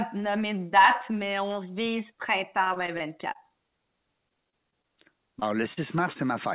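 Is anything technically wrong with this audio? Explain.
Yes. There are two kinds of packet loss fault in this speech clip.

From 2.64 to 3.84 s, just after "mais on vise", there is repeated packet loss (robotic sound). Seven gaps follow one another, the longest 22 ms. Each lost packet is patched by extending the last sound, and about 11 percent of the stretch is filled this way. A second run from 4.29 to 4.86 s has five gaps, the longest 26 ms, about 15 percent concealed. Both stretches sound choppy and robotic, with pieces missing.

Short concealed packet loss follows at 5.40 to 5.43 s, 5.73 to 5.79 s and 6.13 to 6.17 s. Each time, about 20 ms of audio never arrived in time. The receiver carried the last sound forward, from its pitch if voiced or as shaped noise if not, then blended back into the real signal. Each one is heard as a brief smear or wobble.

The call path itself stops at 4 kHz, which fits a G.711 mu-law codec at 64 kbps.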